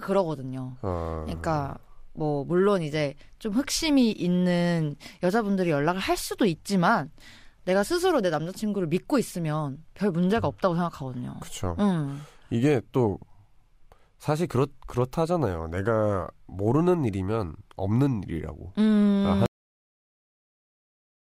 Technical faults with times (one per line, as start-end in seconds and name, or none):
19.46-21.34 cut-off end